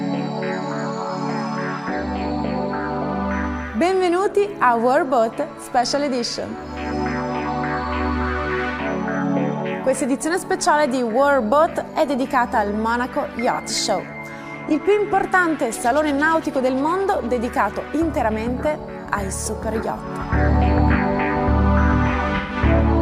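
At 13.53 to 13.60 s there is AAC frame loss with concealment: about 43 ms of audio, which fits a single lost frame, is rebuilt by the decoder from the last good spectrum, giving a short smeared, noisy or phasey patch. A longer dropout follows at 22.36 to 22.56 s, where 128 ms of audio, consistent with three consecutive lost frames, is synthesised the same way, so the concealed stretch is longer.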